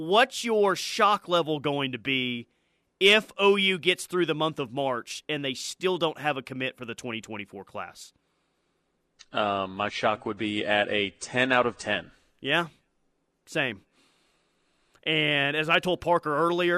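No technical faults can be heard anywhere in this speech recording; the signal stays continuous and steady throughout.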